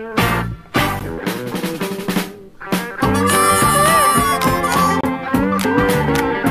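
At 0.99 s and again from 5.01 to 5.03 s, 4 s apart, gaps between stream segments drop in hard-edged silences of about 14 and 26 ms, seen as flat waveform and blank spectrogram columns.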